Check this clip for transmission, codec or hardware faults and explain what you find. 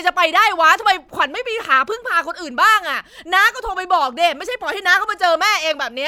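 Nothing in the speech recording points to a technical problem, and the signal stays continuous and stable for its whole duration.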